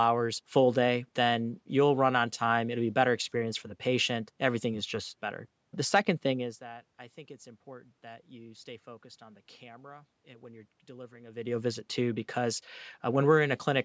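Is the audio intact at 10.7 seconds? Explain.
Yes, the audio is intact at 10.7 seconds, with no fault in the sound at that point.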